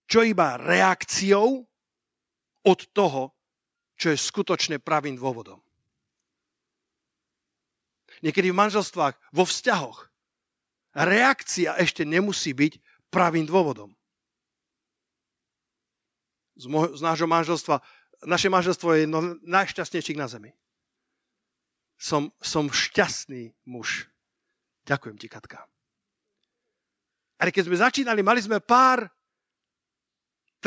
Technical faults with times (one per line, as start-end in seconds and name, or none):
none